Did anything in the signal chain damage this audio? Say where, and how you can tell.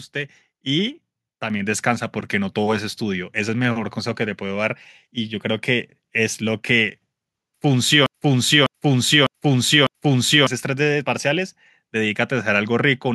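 Yes. A microphone volume step-up occurs at 1.5 s, where the whole signal jumps by about 5 dB in one go, speech and background noise together. Because the floor rises with the speech, the change happened before any speech processing, at the input gain itself. This points to call-processing software that judged the microphone too quiet and raised the device's input volume through the driver in a single step rather than ramping it.

A broken-record loop runs from 8.06 s to 10.47 s. A 0.60 s fragment plays back four times in a row, each repeat identical, so the audio that belonged in those 2.4 seconds never arrives. This is likely a stall in the playback or streaming stage, where the player or encoder stopped receiving new data and kept resending the last fragment still held in its buffer.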